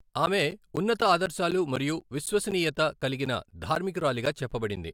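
From 0.26 s to 4.77 s, periodic USB or driver dropouts tick every 0.25 s: around twenty gaps, each about 10 ms of speech replaced by silence as the driver stalls. Their strict regular spacing separates them from random clicks or network packet loss.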